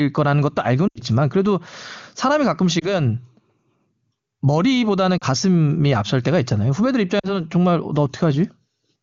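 Lost AMR speech frames occur at 0.88–1.01 s (80 ms lost), 2.79–2.95 s (20 ms), 5.17–5.24 s (40 ms) and 7.19–7.40 s (40 ms). After radio errors, the wideband decoder repeats the last good pitch and vocal tract settings at falling gain. The single lost frame gives a brief dip or warble. The longer runs sink to near silence, and the voice returns weak or rough. On a spectrogram, the harmonics smear flat and then thin out, and the waveform envelope sags. The AMR-WB path itself sounds clear, which fits a high rate such as 23.85 kbit/s.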